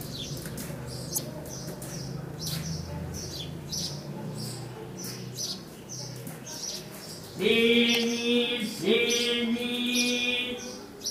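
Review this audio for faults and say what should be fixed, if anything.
There's a short burst of damaged data in the compressed stream from 1.14 to 1.18 s. Corrupted bytes there left the decoder misreading frames and losing sync until it found a clean frame header. Re-export from the original source and verify transfers with checksums.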